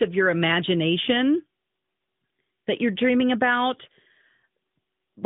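Listening through this speech clip, which has the narrow telephone-band sound of an AMR narrowband mobile call with nothing heard above about 3.8 kHz, nothing stood out as a fault.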